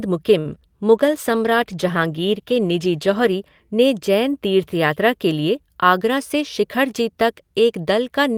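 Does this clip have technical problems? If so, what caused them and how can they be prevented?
Yes, there are four kinds of fault, all early or in the middle of the speech.

A short stall from a late packet occurs at 0.39–0.47 s. A packet arrived late and the jitter buffer ran dry, so the receiver held the last sound for 58 ms and then resumed exactly where it left off. That is why a sound drags but nothing is skipped. This separates it from the losses that follow, and it added 58 ms of delay. A slightly deeper jitter buffer, or a more stable network path, would prevent it.

Short concealed packet loss follows at 0.55–0.58 s and 0.60–0.78 s. Each time, 20 ms of audio never reached the decoder. The receiver extended the preceding sound to cover the gap and then blended back into the real signal, giving a brief smear or wobble. Unlike the stall, real audio is actually gone here, so a consonant can drop out. 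Forward error correction, such as Opus in-band FEC, or less packet loss on the link, would prevent it.

A call bitrate drop runs from 0.94 to 3.42 s. The encoder's rate fell from 32 to 15 kbps and stayed at its lowest for about 2.4 s, so the speech turns rough and muffled as detail and high frequencies are coded away. It differs from concealment because the degradation is continuous over seconds rather than a momentary glitch. Steadier available bandwidth, or a higher minimum bitrate setting, would prevent it.

A jitter buffer speed-up spans 5.86–6.61 s, starting right after "तीर्थयात्रा के लिए". The buffer had grown too full, so the receiver cut short pitch-period pieces repeatedly, removing roughly 70 ms and running the speech at about 107% speed. The pitch stays the same while the pacing sounds hurried, which is what distinguishes it from a bitrate drop, where the timbre changes instead. 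Smoother packet delivery, or gentler buffer adaptation, would prevent it.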